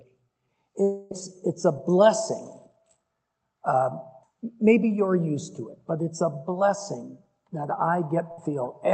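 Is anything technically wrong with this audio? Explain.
Yes, there are two gaps where audio failed to arrive. A long network dropout, likely, from 0.83 to 1.12 s: about 0.28 s never arrived, and the receiver stretched the last sound into a fading buzz or hiss before playback resumed further on. A burst of packet loss at 8.32 to 8.38 s: about 60 ms went missing, so the preceding sound is held and faded briefly, then the audio jumps ahead.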